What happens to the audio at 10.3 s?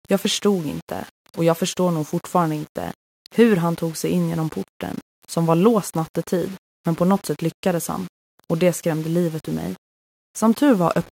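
At 10.3 s, as across the whole clip, the speech carries grainy distortion at about 25 dB below the signal, likely low bit depth without dither, around 7 bits rounded. Unlike steady dither hiss, this grit follows the signal and turns quiet moments gritty.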